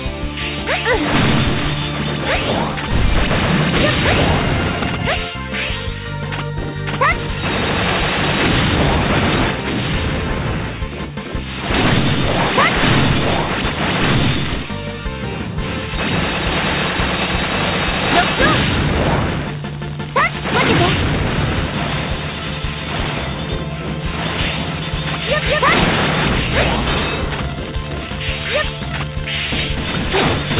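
No technical faults can be heard anywhere in the recording. It has come through a call path whose top end stops at 4 kHz, which fits a narrowband telephone codec such as G.711.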